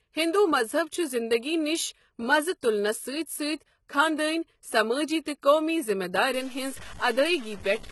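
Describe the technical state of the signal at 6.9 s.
At 6.9 s the speech sits inside a stretch of low bit depth without dither, running from 6.34 s to the end at 7.92 s. The sound is coarse and grainy, with error that tracks each syllable, likely from truncation to about 6 bits. Quiet passages sputter or drop out. The waveform shows visible stair-step levels, and the spectrogram shows broadband grit around 20 dB below the speech.

Underneath, the same moment carries low-bitrate audio saved at a high bitrate: the high-rate MP3 still holds the smeared, warbly artefacts of a likely earlier low-bitrate encoding. On a spectrogram, nothing appears above 11.8 kHz, a flat hard ceiling that a high-bitrate encode would not impose on its own.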